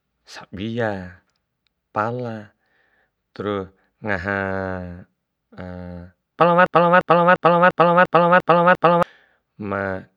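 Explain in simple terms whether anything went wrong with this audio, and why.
A broken-record loop runs from 6.66 to 9.03 seconds: a 0.35-second snippet of speech repeats seven times back to back. The player or stream likely stalled and kept resending its last piece, so the speech meant for that stretch is lost.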